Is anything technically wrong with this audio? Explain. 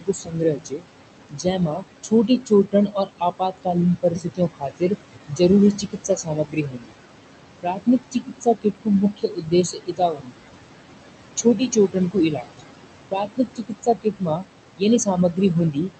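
Yes. Throughout the clip there are noise suppressor artifacts. The suppressor pulls down bands it judges to be steady noise by about 21 dB, frame by frame. The room noise, about 10 dB below the speech, dips in pauses and surges back under speech. On a spectrogram the background looks mottled and patchy, and it pulses with the speech.

There is also speech cut by the noise suppressor. It happens at 0.00–0.86 s, 1.29–5.40 s, 5.73–6.94 s, 7.62–10.45 s, 11.36–12.61 s and 13.10 s to the end. Quiet speech energy was mistaken for noise and lowered by roughly 20–22 dB, so consonants and word endings sound swallowed. The waveform shows syllable tails collapsing abruptly, and the spectrogram shows missing fricative energy. Above about 8 kHz the spectrum is empty, consistent with a wideband call codec.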